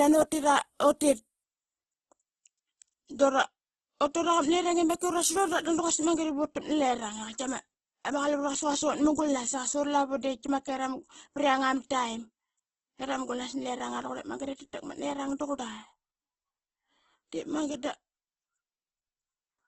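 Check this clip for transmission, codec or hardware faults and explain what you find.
One codec fault runs through the whole clip. Opus compression: heavy grainy, rough texture and nothing above 12.1 kHz, likely from its music mode starved at a rate that fits about 12 kbps.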